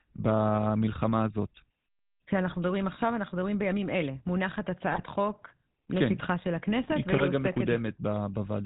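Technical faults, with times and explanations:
Throughout: GSM full-rate codec. Buzzy, gravelly speech with nothing above 4 kHz, from pulse-excited vocal-tract modelling, which fits the 13 kbps full-rate coder.
2.50–2.58 s, 4.88–5.04 s, 7.10–7.21 s: GSM bit errors. Brief squawks and gargling as corrupted filter, pitch and gain values distort the spectrum and level, consistent with roughly 2% bit errors.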